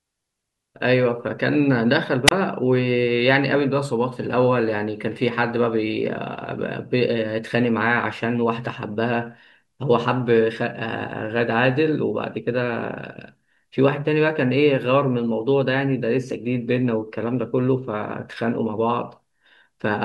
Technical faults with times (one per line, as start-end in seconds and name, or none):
2.26-2.31 wireless microphone squelch dropout